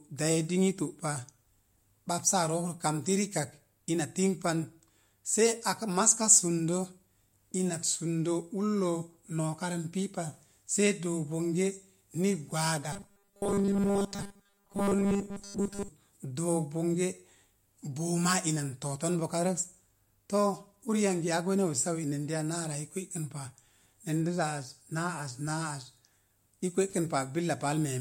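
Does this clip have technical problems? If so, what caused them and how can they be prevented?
Yes. From 12.93 to 15.88 s the speech turns into robotic sound from repeated short buffers: a rigid metallic 200 Hz buzz, which fits a 5 ms segment replayed for most of that stretch, likely because audio arrived too seldom. Larger jitter buffers and more processing headroom prevent it.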